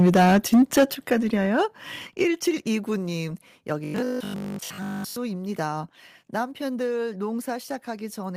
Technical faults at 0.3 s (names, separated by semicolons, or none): microphone overload